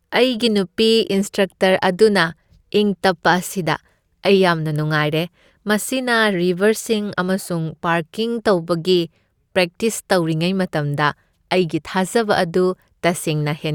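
Nothing technical goes wrong in this speech recording, so there's really nothing to flag here.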